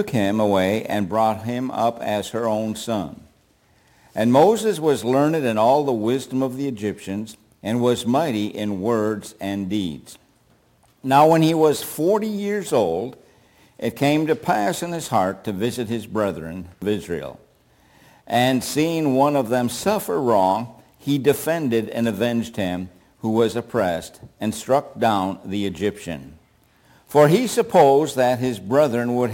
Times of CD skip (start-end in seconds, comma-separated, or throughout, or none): 16.81